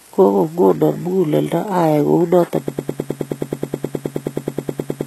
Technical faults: HE-AAC compression; broken-record loop

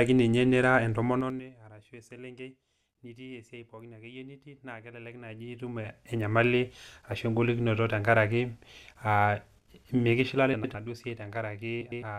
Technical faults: zipper noise; frames out of order

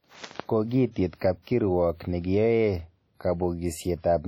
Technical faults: WMA compression; pre-echo

